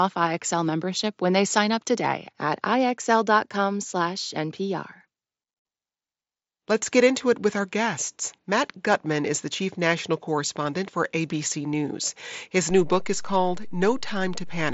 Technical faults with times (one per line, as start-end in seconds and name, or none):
12.70-14.73 DC step